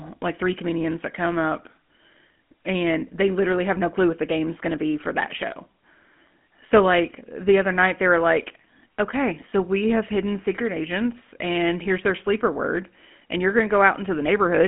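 Throughout, the speech carries plainly audible GSM full-rate codec damage. The codec rebuilds the voice from a vocal-tract model driven by sparse, regular pulses, which fits a 13 kbps stream. The band runs 150 Hz to 3.4 kHz, nothing passes above 3.7 kHz, and voiced sounds turn buzzy and gravelly.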